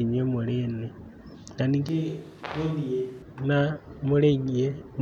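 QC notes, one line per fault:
1.89–3.22 s, switch to a distant microphone: the speech suddenly goes roomy and hollow, drops by about 5 dB, loses its low end, and gets a room-noise bed sitting only about 30 dB under the voice. At 3.22 s it snaps straight back to the close, full sound. Both transitions are abrupt, with no fade, which likely means the close mic's signal dropped out and the recording fell back on a farther mic picking up more room.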